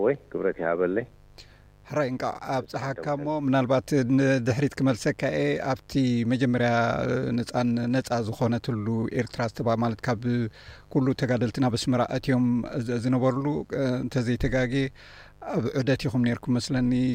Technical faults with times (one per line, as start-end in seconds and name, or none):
0.00-17.14 mains buzz